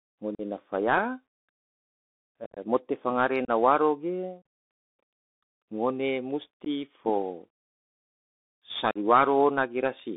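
The whole clip passes through the Bluetooth CVSD headset codec. Speech is confined to roughly 250 Hz to 3.6 kHz. Each sample is a single up-or-down step, which fits a 64 kbit/s link. Loud highs outrun the step and distort. S sounds turn scratchy over a grainy hiss.

Unconcealed Bluetooth headset packet loss cuts holes at 0.35–0.41, 2.45–2.58, 3.45–3.50, 4.42, 6.65–6.67 and 8.91–8.97 s. Lost audio is replaced by silence or an idle pattern, with abrupt edges. The worst, near 2.5 s, scatters 97.5 ms of gaps across 120 ms and sounds chopped.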